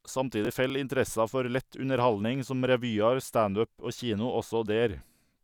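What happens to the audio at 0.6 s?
A brief gritty crackle tears through the speech from 0.45 to 0.70 s: processor overload crackle. The processor falls behind and misses several buffers of a few milliseconds each in a row, and each missed buffer is simply skipped, leaving a hard-edged gap that clicks.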